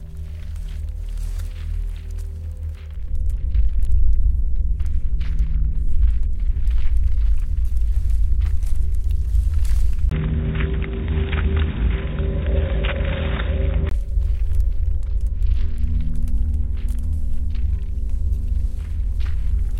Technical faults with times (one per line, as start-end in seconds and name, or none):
10.09-13.91 input switched to a poorer device